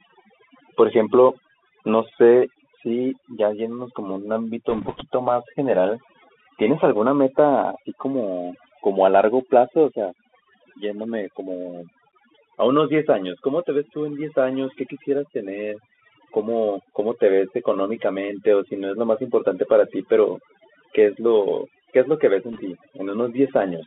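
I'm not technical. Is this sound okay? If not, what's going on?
No, it has three problems. Throughout, overdone noise removal leaves near-silent gaps with twinkling specks between phrases. The voice also went through a Bluetooth CVSD headset codec, so it sounds like a phone, with nothing above about 3.5 kHz, scratchy s sounds and a grainy hiss rather than warbling. Bit errors on a Bluetooth voice link add a brief rushing crackle, not sharp clicks, from 4.70 to 5.02 s and from 22.53 to 22.61 s.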